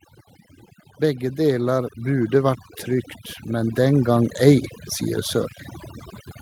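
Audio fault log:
Throughout: overdone noise removal. The noise reduction is set too aggressively, so any frequency band close to its noise estimate is pulled far down or removed. Quieter parts of the speech disappear with it, leaving near-silent gaps sprinkled with twinkling specks.
0.98 to 2.73 s and 3.46 to 4.42 s: automatic gain rising. Twice the gain control judges the input too quiet and raises its gain gradually, by about 7 dB over the first 1.75 s and about 5 dB over the second 0.96 s, so voice and background swell together.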